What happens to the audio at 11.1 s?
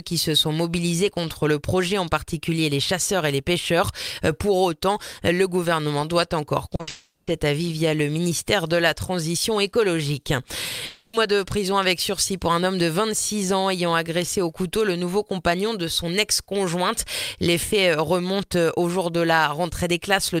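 At 11.1 s the audio is inside a gap running from 10.85 to 11.15 s, likely a long network dropout. For 280 ms the receiver stretches the last sound into a fading buzz, and playback then resumes with that 280 ms of audio missing.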